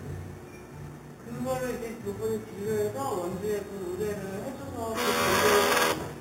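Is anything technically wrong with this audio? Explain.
Yes. Throughout the clip a bright, metallic fizz rides on top of the sound, rising and falling with its level and sitting only about 12 dB below it. This is imaging from sample-and-hold upsampling: each sample was simply repeated with no smoothing filter, which fits audio raised from 8 kHz to 48 kHz. Mirrored copies of the spectrum appear around each multiple of 8 kHz, the lowest spanning 4 kHz to 8 kHz and moving opposite to the pitch.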